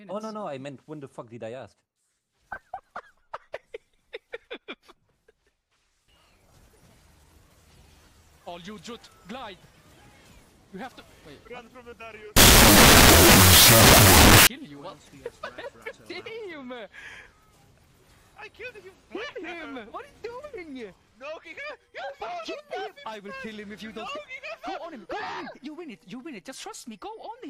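From 12.37 to 14.47 s the audio breaks into a loud, harsh noise bed, the signature of a wrong sample width. Data stored as 16-bit integers are being read as unsigned 8-bit values, so each original sample is split into two. The low bytes become random-sounding hiss, while the high bytes carry a buried trace of the real sound. That trace plays at half speed and an octave lower. A byte-order swap would keep the original speed and pitch, so the slowdown marks this as a width mismatch.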